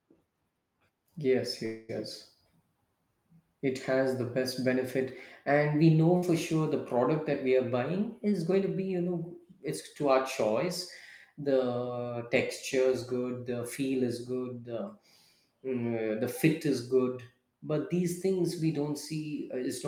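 A speech recording with three faults. From 1.65 to 1.91 s the sound stalls into a fading buzz or hiss for about 233 ms and then carries on with nothing lost, a call audio freeze, likely from packets held up in transit until the jitter buffer ran dry. At 6.17 to 6.27 s a burst of packet loss leaves a brief fill of about 56 ms, after which the audio jumps ahead past roughly 60 ms that went missing. From 7.99 to 8.94 s the speech sounds hurried but keeps its pitch, running at 107% speed. This is a jitter buffer speed-up, where the receiver trimmed short pitch-period slices, around 70 ms in total, to shed excess buffered delay.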